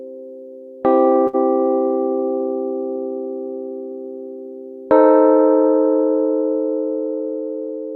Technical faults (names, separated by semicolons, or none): short stall from a late packet